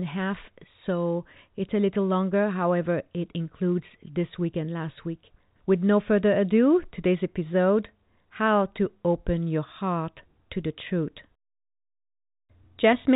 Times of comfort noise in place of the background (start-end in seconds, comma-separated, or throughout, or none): none